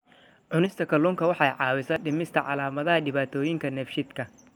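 A speech clip with two faults. From 0.66 to 0.89 s, one channel drops out, just before "kalluunka waxa". The level falls abruptly by about 6 dB, likely because one stereo channel went missing before the mono sum. At 1.96 s, just before "dhimista calaamadaha", a dropped buffer (overrun) causes a jump. Roughly 20 ms of sound is skipped, likely because samples were overwritten before they were read.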